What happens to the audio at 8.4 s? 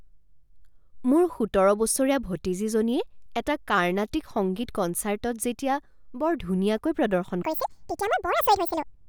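At 8.4 s you're inside a section at the wrong speed, running from 7.42 s to the end at 9.08 s. The speech plays back at 1.92 times its recorded rate, likely from being fitted to the wrong clock, so it sounds hurried and jumps up nearly an octave in pitch.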